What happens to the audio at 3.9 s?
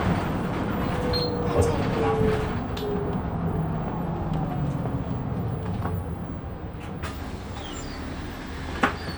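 Nothing goes wrong at 3.9 s; the sound carries straight through that moment with no dropout, click, distortion or other fault.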